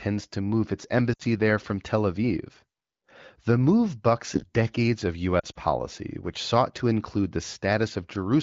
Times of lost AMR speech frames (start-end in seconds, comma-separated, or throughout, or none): 1.13-1.22, 5.40-5.61